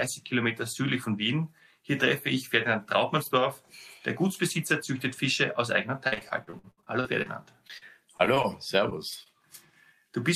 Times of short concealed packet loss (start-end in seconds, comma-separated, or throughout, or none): 8.90-8.93, 9.23-9.28